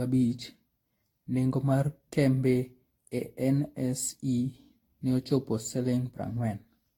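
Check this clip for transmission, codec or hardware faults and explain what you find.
The speech shows one codec fault throughout. Generation loss, likely from around ten successive lossy re-encodes at roughly 70 kbit/s, fitting Vorbis: each pass requantises on a shifted frame grid, leaving swirly, hollow, smeared speech with blurred onsets and nothing above 19.1 kHz.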